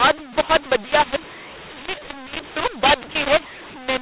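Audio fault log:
throughout, mu-law and A-law mixed up: the speech was coded with the mu-law curve but decoded with the A-law curve, so each 8-bit code maps to the wrong level. Loud and soft samples are scrambled, giving harsh, gritty distortion, and the quietest codes are lifted well above zero, so pauses hiss. Ordinary telephone bandwidth (nothing above 4 kHz) is expected, but clipping or bit-crushing would leave silence quiet, whereas here the noise fills the gaps.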